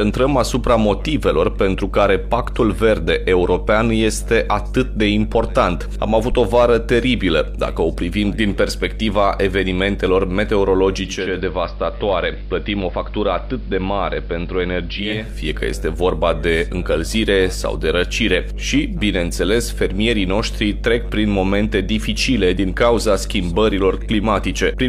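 A mains hum runs through the whole clip, a steady 50 Hz tone with low harmonics sitting only about 10 dB below the signal. A ground loop or nearby transformer is coupling the power line into the audio path.

From 10.95 to 15.41 s, digital radio blending to analogue occurs. The receiver loses the digital stream and cross-fades over 0.48 s to the AM broadcast. Level drops about 3 dB and hiss rises to roughly 35 dB below the signal until it fades back.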